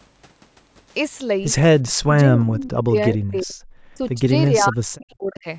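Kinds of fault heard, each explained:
Speech suppressed in double talk: The speech dips hard at 1.86 to 3.55 s, 3.89 to 4.32 s and 4.51 to 5.47 s, with the deepest drops about 40 dB down. Around one and a half seconds of the first stretch is affected, and roughly a second of the last. This is likely an echo canceller that could not tell the near talker from loudspeaker echo while both sides spoke at once, so it attenuated everything.
Echo leak: Two brief scraps of a delayed copy of the speech come back, at 2.64 to 2.71 s and 3.38 to 3.42 s. Both trail the original by 354 ms. The first sits about 15 dB below the speech, and the second is much fainter at about 30 dB down. The pattern points to a likely cause at a loudspeaker endpoint, where the echo canceller left residual pickup unremoved and sent it back into the call.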